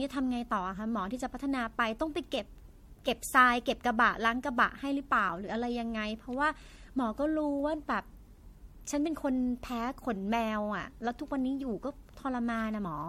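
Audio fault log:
throughout, generation loss: the speech sounds swirly, smeared and hollow, with blurred consonant attacks and nothing above 16.5 kHz. This is likely the result of repeated lossy coding, decoded and re-encoded with MP3 about five times at rates that fit roughly 64 kbit/s. Each pass quantises the signal again on a shifted frame grid, so its noise and spectral holes stack onto the last, sounding worse than one encode at that rate.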